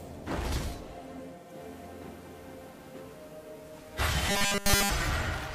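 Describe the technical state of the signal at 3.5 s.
Digital radio blending to analogue is under way at 3.5 s, inside a span running from 1.25 s to 5.16 s. The receiver lost its digital stream and cross-faded over about 0.41 s to the station's FM analogue broadcast, where the sound stays until the return blend near 5.16 s. At this moment, FM hiss sits at roughly 35 dB below the signal, and the level has shifted by about 1 dB.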